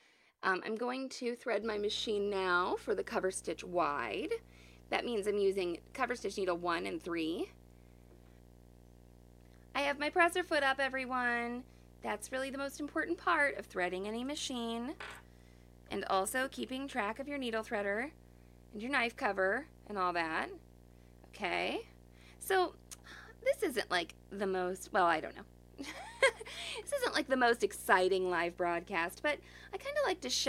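From 1.62 s, right after "I'm going to", a video or display buzz sets in and persists to the end. A screen or video cable couples into the audio, giving a 60 Hz field-rate buzz with hash above, about 25 dB below the speech. It shows on a spectrogram as a steady line with harmonic stacks.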